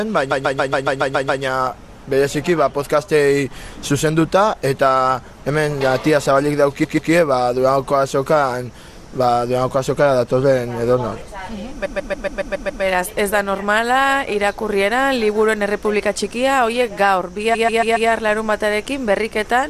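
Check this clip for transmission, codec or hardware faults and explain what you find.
Repeated frames stutter the audio four times: 0.30–1.42 s, 6.83–7.11 s, 11.84–12.82 s and 17.53–18.09 s. Each time a 139.3 ms block of compressed frames plays over and over, eight, two, seven and four extra times. The waveform shows identical copies side by side, and the spectrogram shows a tiled pattern.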